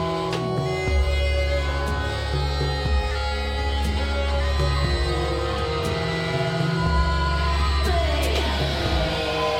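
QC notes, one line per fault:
No faults detected in this music.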